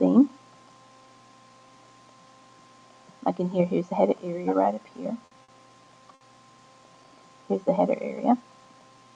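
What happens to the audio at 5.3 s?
A short stall from a late packet occurs between 5.25 and 5.34 s. A packet failed to arrive on time, the jitter buffer emptied, and the receiver held the last sound for about 60 ms until the packet turned up, then carried on from the same point. Nothing is lost, but the sound hangs slightly too long there, with a faint buzz or dip, and everything after it runs about 60 ms later.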